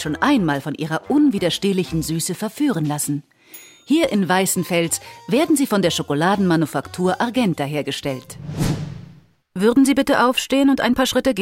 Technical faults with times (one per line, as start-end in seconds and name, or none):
none